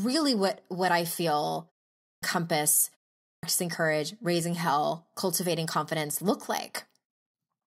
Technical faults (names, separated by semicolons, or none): clipped start after a pause